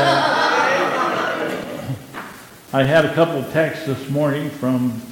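From 1.46 s to 3.36 s, twelve CD scratch ticks recur about six times a second, each only a few milliseconds long. A blemish defeats error correction once per disc revolution, so the player conceals the damage. Their steady rotational spacing distinguishes them from random vinyl crackle.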